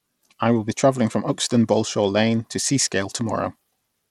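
Bluetooth SBC compression, likely the cause, runs through the whole speech clip from start to finish, and its damage is plainly audible. The codec splits the signal into a few wide sub-bands and hands out bits without any model of hearing, so at a starved allocation consistent with roughly 96 kbps the upper bands get little or nothing. The treble flickers and thins, a gritty quantisation noise rides on the speech, and aliasing adds a rough edge, with no content above 20.8 kHz.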